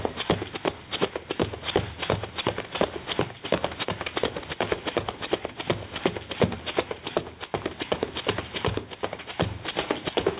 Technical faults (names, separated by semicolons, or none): gain pumping